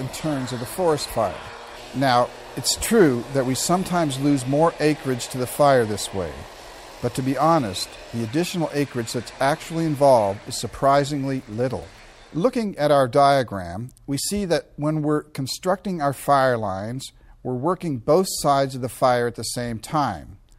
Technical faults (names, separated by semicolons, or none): none